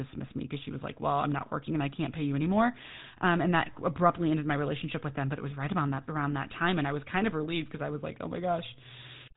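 Throughout, the speech shows GSM full-rate codec damage: a buzzy, gravelly roughness from coarse pulse excitation, beyond the plain dullness of losing everything above 3.9 kHz.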